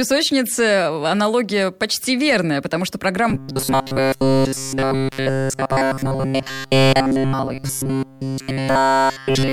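From 3.30 s to the end of the clip at 9.52 s, the speech turns into a rigid, metallic buzz pitched at 134 Hz that only loosely tracks the words. This is robotic sound from repeated short buffers. The likely cause is new audio arriving too seldom, so the playback side keeps looping a tiny fragment of roughly 7.5 ms, which is one cycle of the 134 Hz buzz, while the real audio is skipped. Essentially all of this stretch is made of those repeats.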